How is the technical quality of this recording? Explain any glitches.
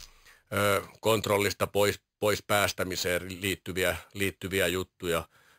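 The recording's technical quality is compromised throughout the clip by imaging from sample-and-hold upsampling. It adds a bright, metallic fizz that follows the speech's level. Each sample was repeated without smoothing, which points to an original rate near 11 kHz. That mirrors the spectrum into 5.5 to 11 kHz, about 13 dB down. A spectrogram shows harmonics reflected above 5.5 kHz and moving opposite to pitch. The waveform shows tiny stair steps.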